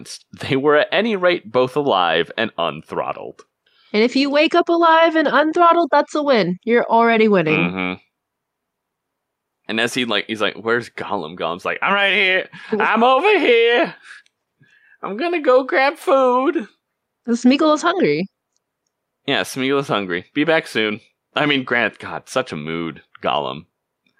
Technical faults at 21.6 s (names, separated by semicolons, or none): none